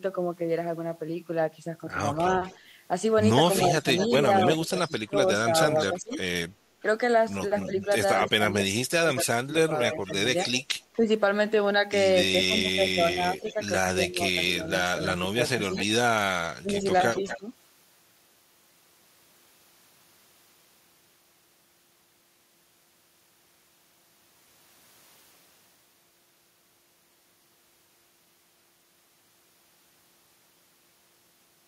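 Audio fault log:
2.15–10.97 s and 13.44–17.39 s, echo leak: a delayed copy of the speech trails the original by about a quarter second (246 and 249 ms), roughly 10 dB down, likely loudspeaker pickup at the far end that its echo canceller failed to remove and sent back.
3.68–17.48 s, speech suppressed in double talk: the talker's level dips in scattered pieces, around three seconds in all, falling by as much as roughly 25 dB, likely because an echo canceller mistook overlapping speech for echo and attenuated both.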